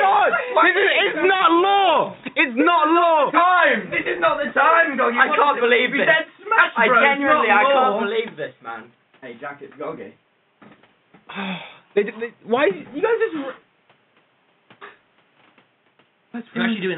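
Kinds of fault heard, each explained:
No technical fault can be heard anywhere in the audio, and the signal stays steady and intact throughout.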